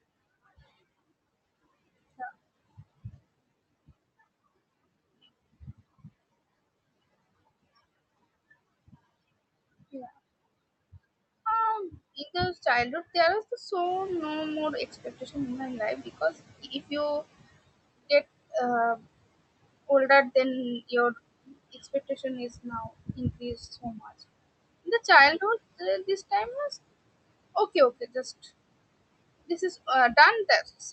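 At 13.83 s the noise suppressor is caught out, and the suppressor can be heard catching up. The room's background noise jumps by about 11 dB at roughly 14 s. The suppressor's noise estimate still holds the old, quieter level. So the new noise passes with less reduction behind the speech. Over the next 3.68 s the estimate climbs. The noise then sinks by about 16 dB, settling by 17.51 s.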